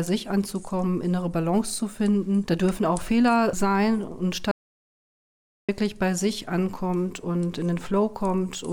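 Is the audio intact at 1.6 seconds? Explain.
Yes, the audio is intact at 1.6 seconds, with no dropout, click, distortion or other fault at that moment.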